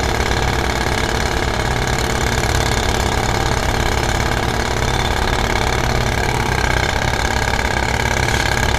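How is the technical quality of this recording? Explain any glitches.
One glitch stands out: a brief blip of damaged data in a compressed stream at about 6.9 s. Part of the encoded data there was corrupted, so the decoder misread the frame, lost sync and had to hunt for the next valid frame header. The result is a short glitch lasting around 14 ms. On a spectrogram it appears as a thin vertical disruption unrelated to the surrounding sound, and the waveform shows a discontinuity.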